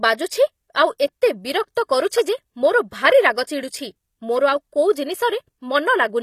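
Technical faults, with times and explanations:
throughout, HE-AAC compression: the speech has plainly audible codec damage, with nothing above 14.9 kHz and a rebuilt, synthetic treble, likely from HE-AAC at around 24 kbps, which copies lower bands upward. A spectrogram shows a hard ceiling and blocky, repeated-looking upper bands.
0.98 s, pre-echo: a short hiss about 15 ms long runs just ahead of an attack that sounds softened. The codec spread noise sized for the loud onset across its block, into the quiet before it. A waveform shows a small noise smear preceding the sharp rise.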